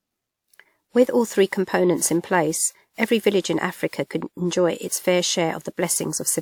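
Generation loss runs through the whole clip: a swirly, hollow smear with blurred attacks and nothing above 19 kHz, likely from about five rounds of lossy re-encoding, consistent with WMA near 128 kbit/s. Hard clipping hits briefly at 1.01 s and 3.03 s, where peaks overdrive a stage by about 1 dB and 3 dB, get cut flat, and snap as short crackles.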